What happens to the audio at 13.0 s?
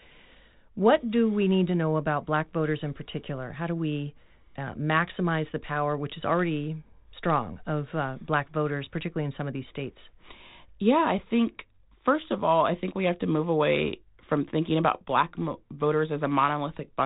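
Nothing goes wrong at 13.0 s: the speech carries on intact through that moment, still limited to the telephone band below about 3.9 kHz that the 32 kbit/s G.726 ADPCM path imposes throughout.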